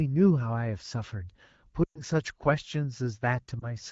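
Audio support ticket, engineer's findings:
Lost AMR speech frames, 1.83–2.01 s. Speech drops to near silence within two frames. Concealment repeats the last good pitch and vocal tract settings at falling gain. The 120 ms gap fits about six lost 20 ms frames. Likely radio-side checksum failures.

Lost AMR speech frames, 3.60–3.72 s. Brief dip or warble. Fits a single lost frame. Same concealment mechanism. AMR-WB at 12.65 kbit/s, speech clear outside these spans.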